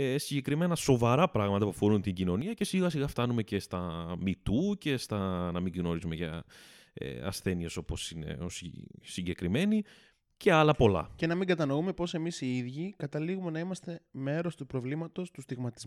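From 2.42 to 2.61 s, after "πράγματα που αφορούν την", speech and background drop together by about 8 dB, a sudden gain jump, likely an unramped digital gain change, recovering before "σιγά σιγά φτάνουμε και".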